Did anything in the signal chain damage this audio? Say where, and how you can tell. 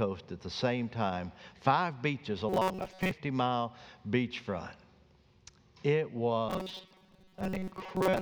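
Yes. Robotic sound from repeated short buffers appears from 2.49 to 3.11 s and from 6.49 s to the end, with a rigid metallic buzz at 188 Hz. This likely comes at the driver or buffer stage: the same 5.3 ms slice is replayed while most of the real audio is skipped. A spectrogram shows evenly spaced harmonics of 188 Hz, and the waveform shows one short cycle repeating.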